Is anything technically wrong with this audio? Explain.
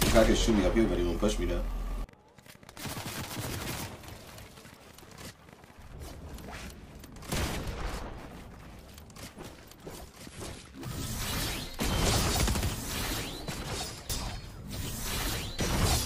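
Yes. From 0.09 to 8.32 s there is a train of clicks, likely from interference from nearby equipment or a faulty connection or power supply injecting repeated pulses. About 70 similar clicks arrive at roughly 8.3 per second, unevenly spaced, as popping about as loud as the sound itself, pauses included.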